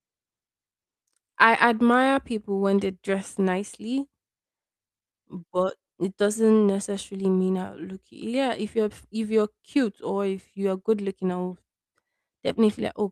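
No dropouts, distortion, clicks or other technical faults turn up anywhere in the recording.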